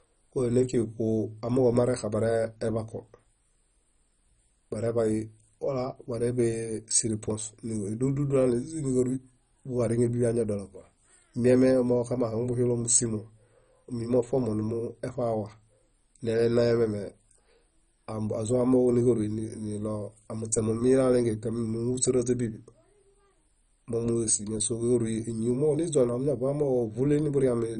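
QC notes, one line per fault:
Throughout: MP2 compression, likely. The speech sounds dull, with nothing above 10.4 kHz. A gurgling, granular roughness sits on it. Upper sub-bands get too few bits and switch off, and the rest are coarsely quantised. The heavy damage fits a bitrate near 32 kbps.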